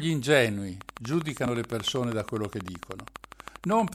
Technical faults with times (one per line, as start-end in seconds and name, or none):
0.81-3.89 train of clicks